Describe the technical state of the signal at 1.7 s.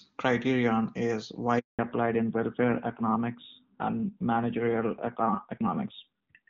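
Silence at 1.7 s: the speech cuts off after "criterion is" and stays dead from 1.59 to 1.79 s. This is a handover gap, where no speech frames arrived while the call switched networks. When sound returns at 1.79 s, everything above 4 kHz is gone and the voice is duller and rougher, consistent with a fallback to narrowband from the HD Voice wideband codec to older narrowband AMR.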